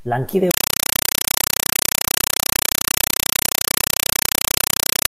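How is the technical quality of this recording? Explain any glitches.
The recording is badly compromised: from 0.51 s to the end, the speech is replaced by loud, chattering static. This is a compressed stream played as audio. An AC-3 (Dolby Digital) bitstream was passed to the output as though it were ordinary PCM samples, without decoding. Each data frame arrives as a 5.33 ms burst of noise followed by zero padding, repeating 31.25 times a second. The rate and burst length point to a stream around 256 kbps.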